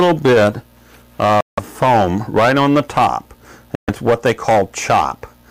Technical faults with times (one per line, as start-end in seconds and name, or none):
1.41-1.59 Bluetooth stall
3.75-3.89 Bluetooth stall